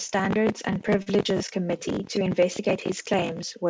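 Between 0.88 and 1.08 s the speech catches and drags four times in quick succession, a stutter where brief stretches of sound are held rather than moving on. These are repeated stalls (stutter): packets arrived late, the jitter buffer kept running dry, and the receiver extended the last sound to bridge each wait. The gaps total about 66 ms, the longest 41 ms, roughly a third of that span. Nothing is lost, only delayed. The speech has no content above 8 kHz, which fits a G.722 call path.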